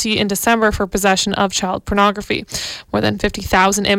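No technical faults are audible.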